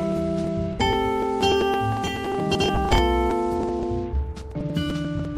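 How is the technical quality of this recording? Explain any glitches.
Quality is held back by two problems: a constant compression sound and one skip.

Throughout, the audio has a watery, swirly character with dulled treble, most likely from MP3 compression at a low bitrate, around 64 kbps. The encoder is short of bits, so it cuts the high end and lets weak detail flicker in and out.

At 2.68 s there's a compressed frames skipped glitch. Frames of about 26.1 ms went unplayed, and the audio jumps ahead by roughly a fifth of a second, which points to several frames. Because adjacent frames overlap, the join sounds like a short smeared blip, not a hard click.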